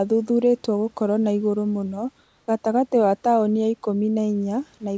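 From 2.24 to 2.48 s, between "gũkorwo ha igũrũ mũno" and "gatagate wa taũni ya", the room background turns into a flat, featureless hiss about 2 dB quieter. This is likely comfort noise in place of the background, synthesised by the receiver during a transmission pause.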